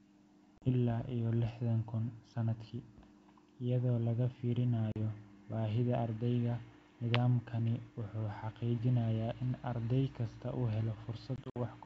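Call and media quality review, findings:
Hard-edged silent gaps at 0.58–0.71 s and 4.92–4.97 s (40 ms lost each, a couple of packets), then broken-up sound at 11.36–11.58 s (100 ms lost across 200 ms, longest run 60 ms, about five packets). Packet loss on an ADPCM call, in the G.722 wideband stream. After each hole the decoder's predictor and step size are out of step with the sender's, so the returning sound is slightly distorted before settling.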